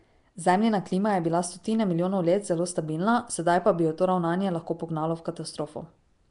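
From start to finish the speech carries a rough, hissy halo and a smeared, underwater quality. Nothing sounds above 10.6 kHz. This is likely Nellymoser compression, coding short blocks with too few bits and filling starved bands with noise, which suggests a bitrate near 44 kbps.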